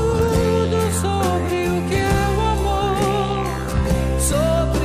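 Right near the end, at about 4.32 s, there's a case of compressed frames skipped. A single frame of the encoded audio never gets played, either because it's missing from the file or because the decoder threw it out as damaged, so the sound jumps ahead by roughly 20 ms. With frames around 21.3 ms long, that's about one frame gone.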